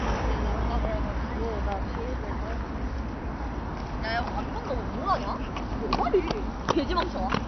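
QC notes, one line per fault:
Throughout: transcoding between lossy codecs, likely an MP3 stage re-encoded as HE-AAC; both codecs' artefacts pile up together, and nothing remains above 6.1 kHz.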